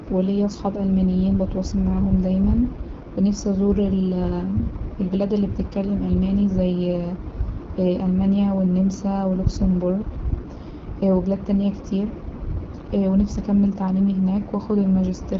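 AMR wideband (HD Voice) codec damage runs through the whole clip. The codec models speech up to 6.4 kHz and synthesises noise above it, with nothing past 7.5 kHz. The rough, raspy texture fits one of its lowest rates, around 8.85 kbit/s.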